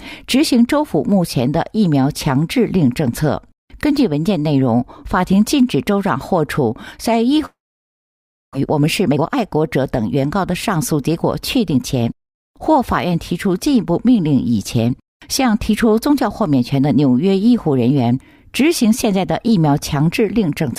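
From 7.45 to 8.57 s the sound breaks off into a fading buzz and then silence, likely a long network dropout. About 0.6 s of audio never returns, unlike a short packet loss that is smoothly bridged. From 8.58 to 12.03 s a jitter buffer speed-up plays the audio about 13% faster, trimming roughly half a second of built-up delay. The pitch stays unchanged, which separates it from a sample-rate error.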